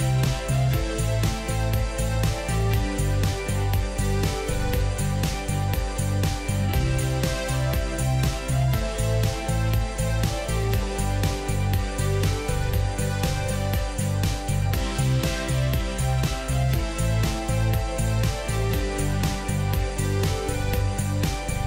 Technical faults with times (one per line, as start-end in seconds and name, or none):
none